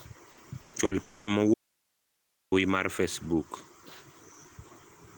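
Three bursts of packet loss arrive in quick succession, at 0.31 to 0.40 s, 0.61 to 0.76 s and 0.85 to 0.94 s. Each gap is bridged by about 60 ms, 120 ms and 60 ms of the last sound continued and turned down before the speech skips ahead, so these are brief repairs, not silences.

From 1.03 to 1.30 s comes a longer break, likely a long network dropout. The concealment runs for about 240 ms and never settles into silence. It differs from the bursts because its concealment lasts noticeably longer before speech resumes with a section missing.

Between 1.54 and 2.52 s, an audio dropout to a faint residue cuts the speech abruptly for nearly a second, leaving only hiss far below the speech level. The likely cause is the signal itself being lost while the path stayed live. Nothing is smeared across the gap, which sets it apart from the concealed network losses.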